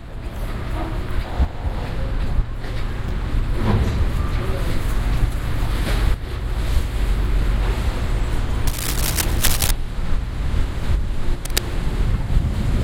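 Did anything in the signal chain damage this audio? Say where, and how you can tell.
Yes. Rough, uneven scratching rides over the sound from 8.67 to 9.71 s and briefly from 11.45 to 11.60 s, nearly as loud as the sound. This is cable scratch noise in the analogue wiring, likely a worn connector whose contact resistance jumps when moved.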